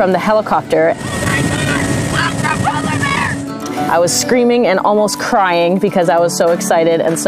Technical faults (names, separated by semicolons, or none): none